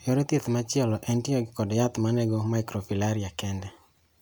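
No technical faults can be heard anywhere in this speech recording. There are no events to place in time, so there is nothing here to date or measure.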